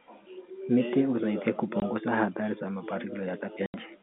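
At 1.80 to 1.82 s the speech briefly drops out, then again from 3.66 to 3.74 s. That's packet loss filled with silence: audio packets never arrived, and the receiver put dead silence in their place. The first hole is 20 ms, which fits one lost packet. The second is 80 ms, about four in a row. Both gaps start and end with hard edges, sitting on top of the narrow telephone-band G.711 sound.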